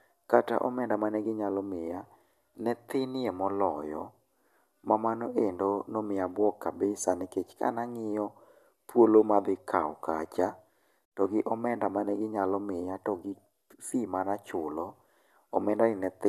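No technical faults can be heard anywhere in this speech recording.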